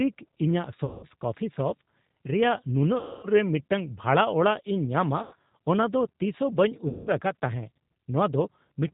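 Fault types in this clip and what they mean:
G.729 codec: The whole clip runs through this 8 kbit/s VoIP codec, which rebuilds the speech from a vocal tract model, a pitch predictor and a handful of pulses per frame. Nothing above 4 kHz gets through, so it sounds narrow, slightly rough and plainly synthetic.
VoIP packet loss concealed by the speech codec: There are four dropouts, at 0.85, 2.99, 5.23 and 6.88 s, covering roughly 180, 240, 90 and 180 ms. The decoder fills each gap by stretching the last sound into a buzzy tone or coloured noise that fades, and the speech comes back weak or distorted for a moment afterwards.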